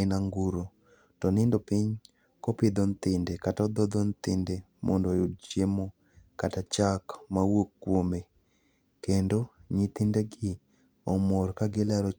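A short speech recording, and nothing technically wrong turns up anywhere in it, so there's no fault to point to here.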